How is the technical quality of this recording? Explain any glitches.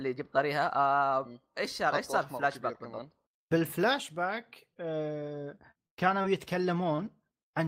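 The recording has a handful of network-style glitches. They're brief but audible, so its technical quality is compromised in a few spots.

Lost packet rebuilt from error correction, at 3.63 s, 4.34 s and 6.98 s: each time a 20 ms packet went missing and was rebuilt from the lower-bitrate backup copy carried in the following packet. There's no gap, but those slivers sound grainier and noisier. In a full-band call the top end would dip too, because the backup copy doesn't hold the highest frequencies and the decoder has to estimate them.

Short concealed packet loss, at 4.74 to 4.78 s and 6.96 to 7.00 s: about 20 ms never arrived in time, and the receiver papered over it by extending the preceding sound, as pitch if it was voiced or as shaped noise if not, before blending back into the real signal. You hear it as a tiny smear or wobble. The second one sits right on top of the 6.98 s rebuild, so that moment gets both treatments.

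Repeated packet loss (robotic sound), from 5.56 to 6.26 s: four separate dropouts land in this stretch, the longest 54 ms, adding up to about 140 ms missing. That's roughly a fifth of the span filled in by continuing whatever came before. A small part of it was also rebuilt from error correction. Because the patches come so close together, the sound turns choppy, with small pieces missing.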